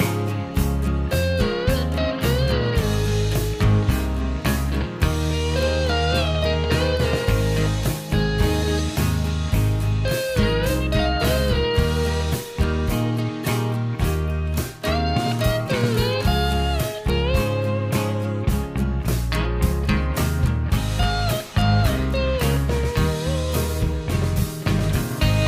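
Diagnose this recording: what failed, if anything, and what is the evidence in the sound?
Nothing failed in this recording, and the sound carries no evidence of a fault.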